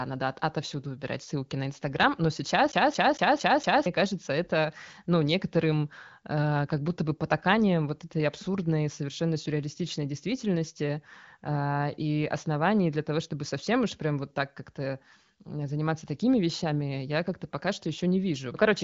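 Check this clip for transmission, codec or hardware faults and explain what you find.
There's one clear fault, a skipping CD stuck on one turn, running from about 2.72 to 3.86 s. A scratch keeps knocking the laser back a track at the same point on every revolution, so a 0.23 s slice of the speech plays five times in a row, with a tiny mute at each jump. You hear a quick, evenly spaced stutter. The HD Voice band-limiting, with nothing above 7.5 kHz, sits alongside this and isn't part of the fault.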